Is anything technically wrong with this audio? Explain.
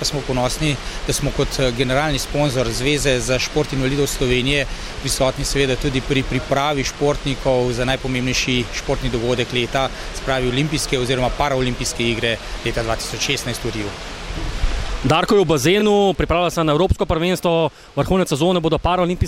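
Yes. From 15.79 to 15.82 s there are repeated frames: one 23.2 ms block of compressed data, which fits a single codec frame, was delivered twice, so the decoder plays that slice again. It is heard as a brief stutter, and the audio runs 23.2 ms longer.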